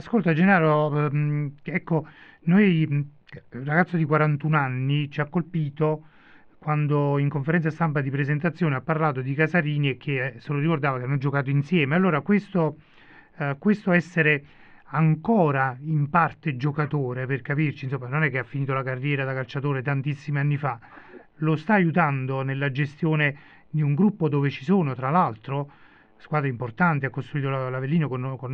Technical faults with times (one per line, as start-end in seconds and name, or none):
none